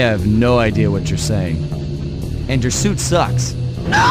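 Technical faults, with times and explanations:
There are no technical faults to report in this audio. Nothing in it calls for a time or an explanation.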